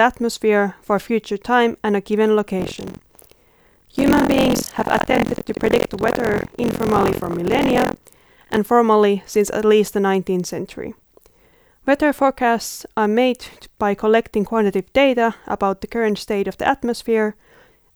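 Speech with buffer tearing from 2.58 s to 8.58 s: a robotic buzz at about 43 Hz, which fits a 1024-sample buffer. Writer and reader have slipped, so roughly a third of each buffer replays audio about 70 ms old, with hard joins on both sides.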